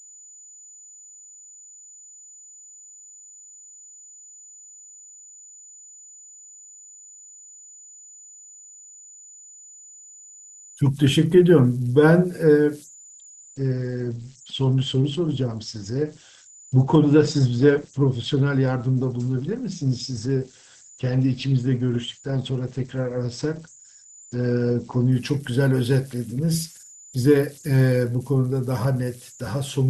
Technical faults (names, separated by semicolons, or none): converter idle tones; adaptive stream at a lower bitrate